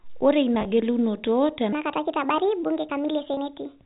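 Speech carried over a G.711 A-law telephone path, so nothing above 4 kHz. Packet loss with pitch repetition appears at 0.55–0.65 s, where about 40 ms goes missing in scattered bits of no more than 10 ms each, and again at 3.34–3.37 s with about 30 ms lost. Each gap is bridged by a briefly held, buzzy repeat of the last pitch period, not the clean silence of a plain dropout. From 1.73 s to the end, a section at the wrong speed plays 1.43 times too fast, raising pitch by roughly seven semitones. Speed and pitch rise together, which sets it apart from a pure pitch shift, and a mismatched playback clock is the likely cause.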